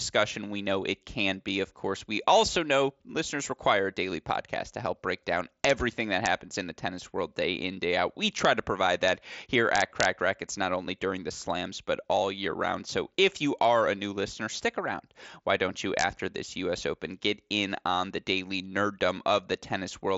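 Integer overflow at 5.65–5.70 s after "to help break down", 6.26 s, 8.45 s before "to provide", 9.08 s after it, 9.76–10.05 s and 15.99–16.04 s: loud peaks wrap to the opposite sign instead of limiting, giving sharp cracks harsher than clipping, beneath the mSBC headset band ending near 7.7 kHz.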